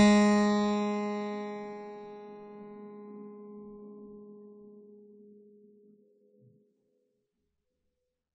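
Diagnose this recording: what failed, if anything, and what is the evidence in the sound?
Across the whole clip the music sounds dull and boxed in, with nothing above 9 kHz, and sustained tones carry a swirling, fizzy smear that is plainly audible throughout. The fault sits at the codec stage and is likely AAC compression. The encoder quantised its frequency lines coarsely against a hearing model and discarded everything above the cut-off, which fits a low bitrate of around 32 kbps.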